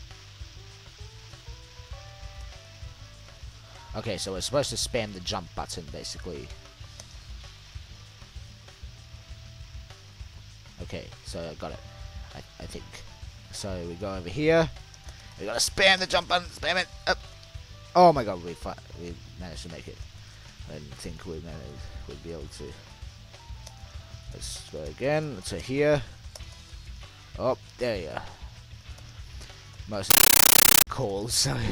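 Compressed stream played as audio, from 30.10 to 30.87 s: an AC-3 bitstream appears to reach the output as raw samples without decoding. Each data frame becomes a 13.3 ms burst of harsh noise, then silence, repeating 31.25 times per second as loud, chattering static replacing the sound.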